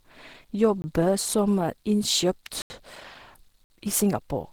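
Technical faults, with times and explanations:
Throughout, Opus compression: grainy, hoarse speech texture, likely from low-rate Opus in hybrid mode, consistent with about 16 kbps, though content still reaches 20.3 kHz.
0.82 to 0.84 s, 2.62 to 2.70 s and 3.64 to 3.70 s, block of digital silence: the sound cuts out with no fade for 20, 80 and 60 ms.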